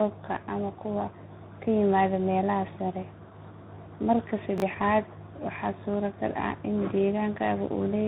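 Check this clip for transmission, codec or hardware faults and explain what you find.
Two faults are audible: tandem coding across the whole clip, and a brief jumble of out-of-order chunks.

Tandem speech coding runs throughout. The sound suggests three speech codecs in a row, ending in CVSD. Each one recoded the previous one's damage, leaving speech rough, muffled and warbly, with nothing above 3.8 kHz.

Chunks out of order occur from 4.58 to 4.62 s. A 20 ms chunk played one chunk late, after its successor, causing a garbled instant.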